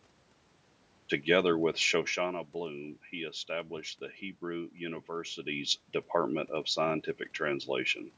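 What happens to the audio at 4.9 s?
Nothing goes wrong at 4.9 s; the speech there comes through intact, with no dropout, glitch or distortion.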